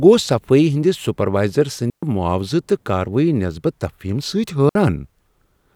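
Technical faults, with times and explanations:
1.90–2.03 s and 4.69–4.75 s, digital wireless dropout: the digital radio link lost too much data for the receiver to rebuild the signal, so the receiver muted itself with a very fast fade rather than passing on corrupted audio. The speech cuts to near silence for about 127 ms in the first gap and 60 ms in the second, leaving clean holes with no crackle or noise burst at either edge.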